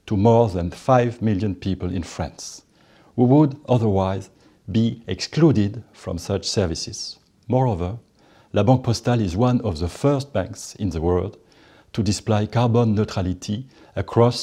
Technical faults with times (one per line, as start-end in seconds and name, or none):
none